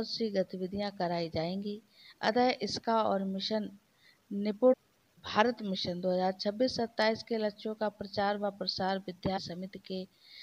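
Short glitches from 4.72 to 4.74 s and from 9.36 to 9.38 s point to damaged data in the compressed stream, where the decoder lost sync and hunted for the next valid frame.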